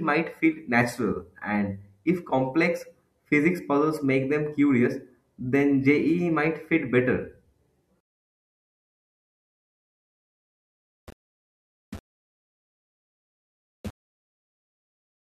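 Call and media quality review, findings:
From 8.00 s to end: speech turns grainy, distortion tracking the signal. Likely low bit depth without dither, about 6 bits, rounded. Error follows the waveform. Noise about 35 dB below speech. Quiet passages gritty, softest parts sputter or drop out.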